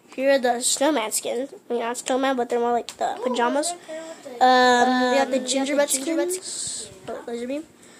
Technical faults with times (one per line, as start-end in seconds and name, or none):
4.65-6.39 doubled audio track